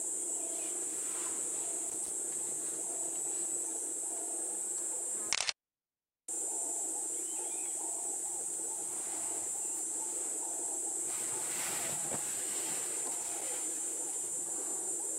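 Loose connector crackle at 1.89 to 2.10 s and again at 13.22 to 13.42 s: a worn or dirty contact intermittently breaks the signal path, giving brief irregular bursts of scratchy crackle.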